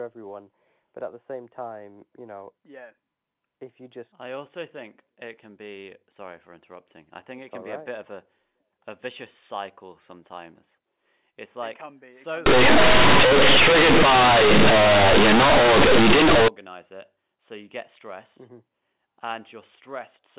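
From 12.46 to 16.48 s, just before "it so you get", the speech turns into very loud, harsh buzzing with heavy noise filling the pauses. This is companded audio read as linear: mu-law telephone bytes were played as plain 8-bit samples without expansion, flattening quiet and loud alike.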